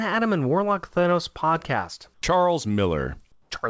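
At 2.14 to 2.22 s and again at 3.32 to 3.50 s, the quiet background gives way to comfort noise, likely because the sender paused transmission during silence and the receiver filled the gap with synthetic noise. The first patch lasts 80 ms and is about 1 dB quieter. The second runs 180 ms and drops about 5 dB, so it is heard as a brief, flat hush. On a spectrogram, each patch shows as smooth, featureless noise with the background's texture gone. The waveform shows a faint, even band. Nothing appears above 8 kHz anywhere, which fits a G.722 call codec.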